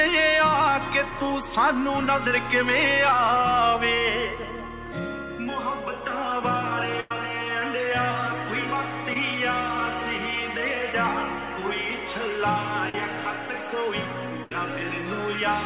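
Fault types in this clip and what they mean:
Burst of packet loss: A run of audio failed to arrive in time. The receiver carried the last sound on and faded it down. Playback then resumes further along, skipping about 100 ms at 7.0 s and about 70 ms at 14.44 s.
Short concealed packet loss: Brief gaps reached the decoder too late. The receiver filled them by extending the preceding sound, then blended back into the real audio. This leaves short smears near 9.13 s and 12.89 s, where 10 ms and 40 ms are lost.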